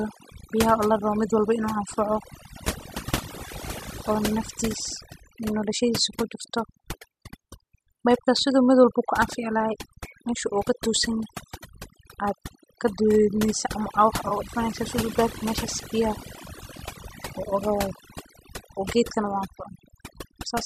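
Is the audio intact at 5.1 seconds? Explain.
No, overdone noise removal runs through the whole speech clip, including 5.1 seconds. The noise reduction is set so hard that bands near its noise estimate are pulled down or cut, taking quiet parts of the voice along and leaving a lowered background that breaks up into twinkling specks.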